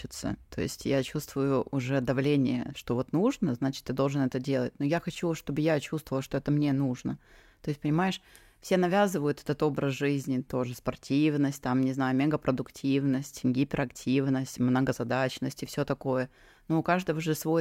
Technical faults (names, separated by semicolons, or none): none